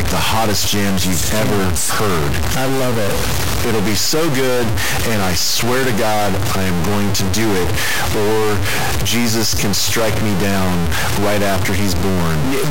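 From start to finish the speech carries a harsh, buzzy distortion that rides on every syllable, and the pauses between phrases are not quiet but filled with a loud, gritty noise. This is likely a stuck bit, one line of the sample data held at a fixed value. About half the samples land off by that bit's weight, roughly a step near -10 dBFS, which points to a high-order bit and explains why the gaps are so noisy.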